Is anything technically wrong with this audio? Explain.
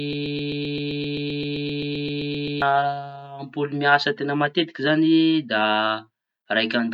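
Yes. From the clip's opening to 2.62 s there is a broken-record loop, already under way at the start. The player or stream likely stalled and kept resending its last fragment, so a 130 ms slice of speech repeats back to back 19 times in a mechanical stutter, and the speech meant for that stretch is lost.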